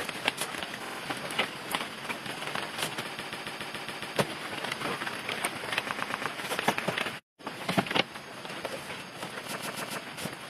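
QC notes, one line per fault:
0.84–0.98 s: repeated frames. A 46.4 ms block plays three extra times, giving a short stutter and adding 139 ms.
3.18–4.16 s: repeated frames. A 139.3 ms block, which fits six compressed frames, repeats seven extra times. That makes a long mechanical stutter and adds 975 ms.
5.90–6.25 s: repeated frames. A 116.1 ms block, consistent with five frames, replays three extra times, stuttering and adding 348 ms.
9.57–9.99 s: repeated frames. A 139.3 ms block, pointing to six frames, replays three extra times, stuttering and adding 418 ms.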